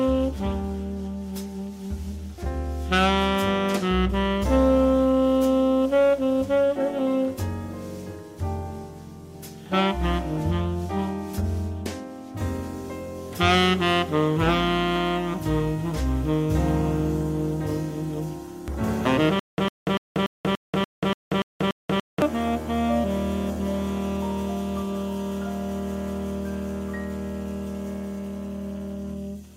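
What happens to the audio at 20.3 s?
A stutter with silent gaps runs from 19.40 to 22.22 s: the same 104 ms burst repeats nine times, every 289 ms, with 185 ms of digital silence between. A stalled player or stream likely replayed its last fragment at each retry, losing the audio meant for that stretch.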